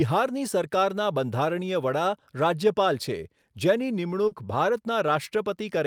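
At 4.27 s, running to 4.34 s, a short concealed packet loss interrupts the speech. About 40 ms of audio never arrived in time, so the receiver filled the gap by extending the preceding sound, carrying its pitch forward if voiced or shaped noise if not, before fading back into the real signal. It comes across as a brief smear or wobble. What sets it apart from a plain dropout is that there is no silence, only invented continuation.

Inside that stretch, at 4.31 s, a lost packet rebuilt from error correction covers about 20 ms. Here the missing frame was recovered from a lower-bitrate copy carried in the next packet, so the decoder played real content rather than a guess. Unlike the concealment around it, which extends the previous sound, this frame follows the actual speech but sounds rougher and noisier.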